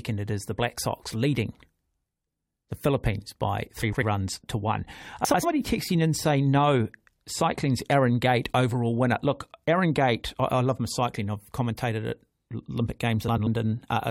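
Frames out of order occur at 3.82–4.03 s, just before "runs to one", and again at 5.25–5.44 s, right after "runs to one" and before "texting in saying no". A third occurs at 13.28–13.47 s. Each time, two neighbouring blocks of about 93 ms were decoded in swapped order. The halves play exchanged. It sounds like a brief garbled flutter. The block length fits runs of four frames. No time goes missing.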